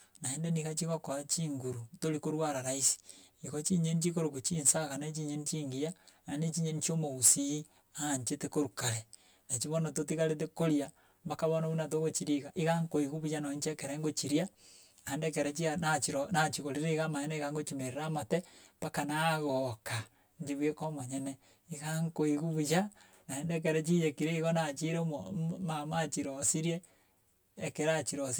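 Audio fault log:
Throughout: channel delay (comb filtering). One channel lags the other by about 10 ms, and when the two are summed to mono the shared speech cancels at evenly spaced frequencies, the first near 50 Hz and then roughly every 100 Hz above it. This gives the hollow, phasey tone. A spectrogram shows fixed horizontal dark notch lines stacked evenly up the spectrum for the whole clip, and the waveform looks smeared, with doubled transients.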